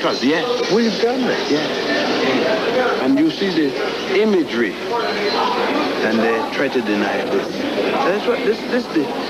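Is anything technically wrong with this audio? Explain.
No, nothing is technically wrong with this audio.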